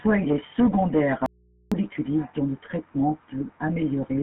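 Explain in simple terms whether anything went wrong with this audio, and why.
GSM full-rate codec damage runs through the whole recording. This early mobile-phone coding rebuilds the voice from a simple model of the throat and mouth, driven by a sparse train of pulses. Much of the fine detail is thrown away, so the speech has a buzzy, gravelly roughness you can plainly hear. The sound is also squeezed into a narrow phone-line band, with nothing above about 3.8 kHz, so it sounds thin and muffled.

Audio dropout to a faint residue, from 1.26 to 1.72 s: for almost half a second the speech suddenly vanishes, leaving only a low, very quiet mains hum, then it returns just as abruptly. That sharp on-off edge is not how a natural pause or fade sounds. The likely cause is a brief break in the signal reaching the recorder while the input behind it stayed switched on and picked up hum.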